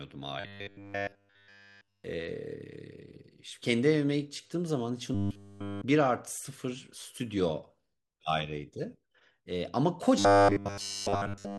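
From 0.40 to 2.04 s, 5.15 to 5.84 s and 10.19 to 11.59 s, the speech collapses into robotic sound from repeated short buffers, likely a 10 ms chunk looped almost entirely, giving a fixed 100 Hz metallic buzz that tracks the words, unlike hum, which ignores them.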